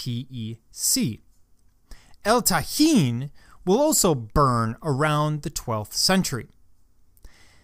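No technical faults can be heard anywhere in the signal, which stays steady and intact for its whole duration.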